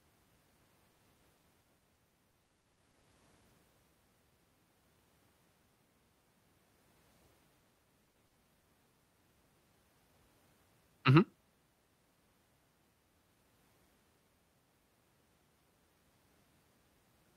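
From 0.91 to 3.05 s the speech turns choppy and robotic, with a stuttering edge and pieces of syllables missing. This is repeated packet loss. Over those two seconds the audio kept failing to arrive. Gaps of up to 40 ms came one after another, about 420 ms in all, roughly a fifth of the stretch. The receiver patched each gap by extending the last sound, and the run of repeated patches is what makes it sound mechanical.

Between 7.59 and 7.63 s there is a brief smear or wobble, a momentary blur rather than a dropout. This is short concealed packet loss. About 20 ms of audio did not reach the decoder in time. The receiver filled that hole by continuing the preceding sound, voiced or noise-like as appropriate, and then blended back into the real signal.

From 8.05 to 8.65 s the robotic choppiness returns, shorter this time. It is repeated packet loss again, with a handful of gaps totalling about 140 ms, close to a quarter of that span. 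The longest gap here is 60 ms, so this stretch has the longest single hole, which the receiver again papered over by extending the last sound.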